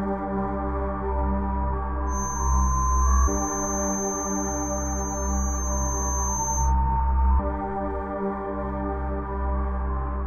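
From 2.05 s to 6.74 s a feedback whistle sits behind the sound: a thin, steady tone at 6.3 kHz, roughly 10 dB below the main signal, slowly swelling and fading. The likely cause is a loudspeaker-to-microphone loop hovering just short of a full howl. On a spectrogram it appears as a narrow horizontal line.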